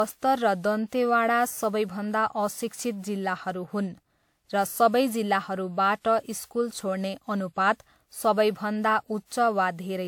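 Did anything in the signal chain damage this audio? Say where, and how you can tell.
Yes. Throughout the speech there is a swirly, hollow smear and softened consonant attacks, despite content reaching about 20.1 kHz. That points to generation loss at the codec stage, likely from roughly seven WMA passes at 128 kbit/s, each requantising on a shifted frame grid.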